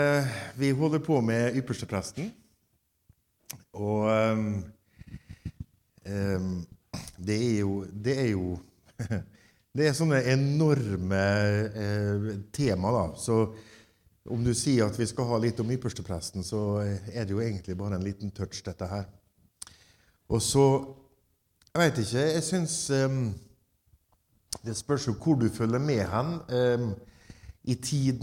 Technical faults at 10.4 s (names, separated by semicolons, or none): none